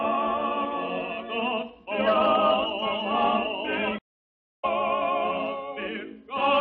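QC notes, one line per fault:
3.99–4.65 s, stream reconnect: 0.58 s of silence while the connection re-establishes, then a fresh decoder resumes the sound roughly 0.7 s further on, skipping material.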